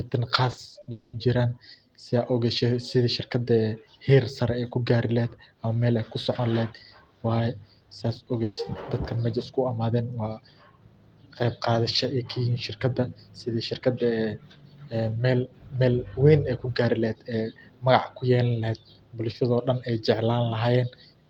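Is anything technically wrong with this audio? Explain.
Yes, the speech has three network-related faults.

From 0.51 to 0.89 s the sound turns choppy and robotic. This is repeated packet loss: four gaps, the longest 60 ms, each patched by repeating the last sound, covering about a third of that span.

From 0.91 to 1.15 s, just before "jiiran saa", a fading buzz or hiss fills about 0.22 s and the original audio there is gone. The likely cause is a long network dropout, with the receiver stretching the last sound across the hole.

At 8.43 to 8.59 s, just before "dadkaan meshan isku imaden", there is a brief held buzz or fading hiss. This is a burst of packet loss: about 140 ms never arrived in time and was filled by continuing the previous sound.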